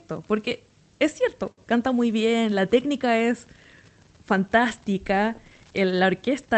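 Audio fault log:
No faults logged; the speech runs over the WebRTC call path as expected, with the Opus coding's upper limit near 8 kHz audible.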